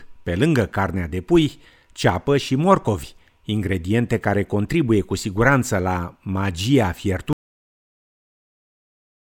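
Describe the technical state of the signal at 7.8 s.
The final buffers were never written, a cut-off end: after "cu siguranță la magia" the speech stops dead at 7.33 s, leaving digital silence with no decay until 9.25 s.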